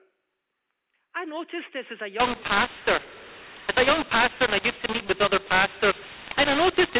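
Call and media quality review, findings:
mu-law and A-law mixed up, 2.20 s to end, right after "noticed this as a". Harsh, distorted speech, scrambled levels, noise filling the pauses. Probable component: G.711 decoder. The A-law stream is expanded with the mu-law table, so sample levels are misread.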